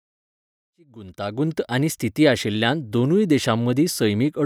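No technical fault can be heard in this speech recording, which opens with a smooth fade-in that begins at around half a second and reaches full level by 1.84 s, shaped the way an editor would apply it, with no click or hard edge.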